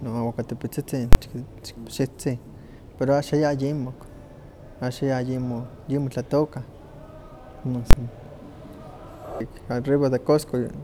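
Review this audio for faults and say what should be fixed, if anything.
There are two sharp bangs in this speech, at 1.13 to 1.15 s and 7.91 to 7.93 s, and both are invalid numbers at full scale. Some calculation blew up to infinite or invalid values, and each one got pinned to the maximum output level for a whole processing block. Each burst lasts about 23 ms, which fits a 1024-sample block, so it's too short to hear as two separate pops and comes across as one loud hit. To prevent it, guard that processing stage against divide-by-zero and overflow, and replace any non-finite values with silence before output.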